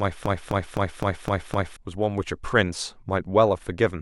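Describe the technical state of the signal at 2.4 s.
At 2.4 s the speech signal is intact, with no audible fault at that moment.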